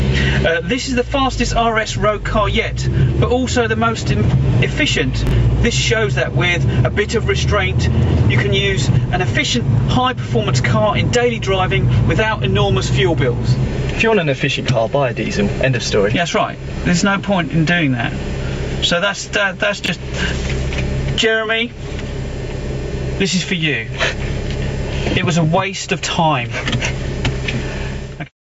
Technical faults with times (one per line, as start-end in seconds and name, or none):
0.00-28.43 gain pumping
5.27-5.31 chunks out of order
19.84-19.88 chunks out of order